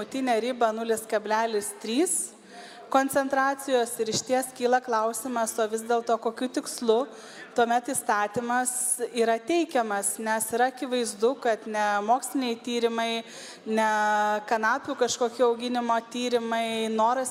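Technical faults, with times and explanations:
No technical faults are audible.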